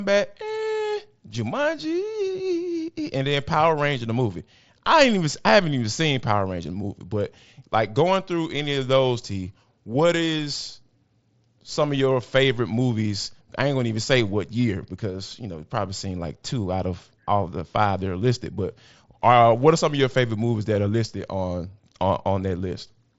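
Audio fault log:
No faults are present; the speech comes through a wideband Bluetooth headset link that fits the mSBC codec, with content reaching about 7.7 kHz and nothing above.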